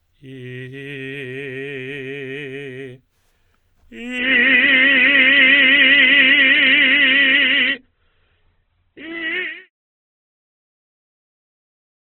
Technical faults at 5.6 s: adaptive stream at a lower bitrate

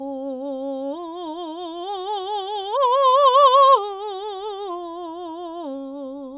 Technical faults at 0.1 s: none

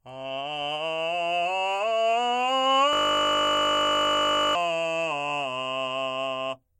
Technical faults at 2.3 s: none

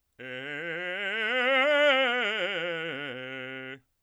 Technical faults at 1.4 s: none

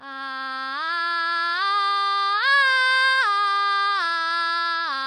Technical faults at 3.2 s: AAC compression

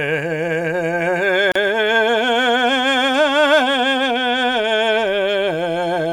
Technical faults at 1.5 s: gap at a join of encoded pieces

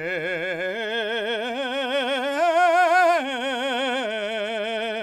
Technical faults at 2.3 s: none

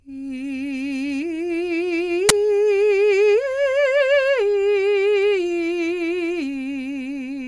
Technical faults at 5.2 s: none

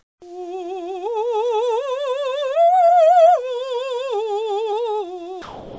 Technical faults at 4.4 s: drift correction step

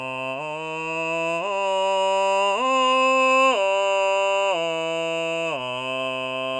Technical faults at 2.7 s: none

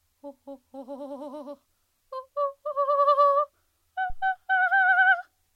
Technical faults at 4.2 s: phantom power thump

